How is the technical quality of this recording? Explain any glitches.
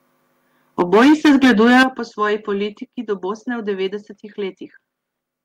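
The recording has two related problems: a stretch of clipped, overloaded speech near the start and two abrupt drops in level while it is happening.

From 0.79 to 1.83 s there is microphone overload. The peaks are flat-topped and the loudest syllables carry a harsh, crackling edge. A large share of the waveform, roughly a fifth, was cut off at the converter's limit, with the input about 10 dB too hot. The likely cause is a microphone input gain set high enough that the converter runs out of headroom and slices off the tops of the waveform.

The microphone volume is stepped down twice, at 0.82 s by about 3 dB and at 1.83 s by about 10 dB. Each is a sudden drop in level affecting the voice and the background together, with no fade. The first comes just after the distortion begins, and the second coincides with its end. That timing points to the likely cause: automatic gain control in the call software detecting clipping and cutting the device's input volume in discrete steps.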